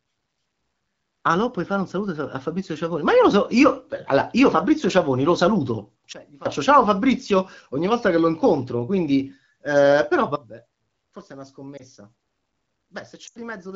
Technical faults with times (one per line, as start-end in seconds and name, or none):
6.13-6.46 sudden gain jump
10.36-13.75 sudden gain jump
11.77-11.82 lost AMR speech frames
13.27-13.37 lost AMR speech frames